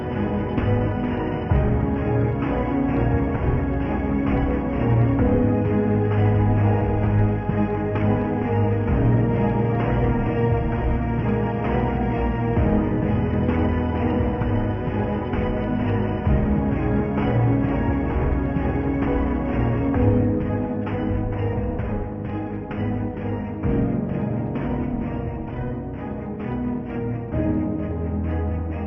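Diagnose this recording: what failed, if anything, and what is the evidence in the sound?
Nothing in the signal chain fails: the audio has no audible dropouts, clipping, glitches or interruptions at any stage from capture to playback.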